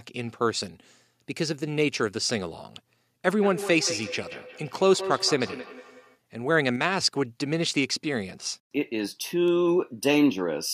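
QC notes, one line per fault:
0.40 to 10.39 s: word clock ticks. Sharp ticks recur about once a second, roughly ten in all. A receiver on its own unlocked clock slips one sample against the sender at each crossing, which points to a clock mismatch of a few tens of ppm.
3.41 to 6.20 s: feedback echo between two devices. The speech returns at a fixed interval of about 200 ms, reaching about 10 dB below the direct sound, because a second device's playback is picked up again by a microphone whose echo canceller cannot remove it.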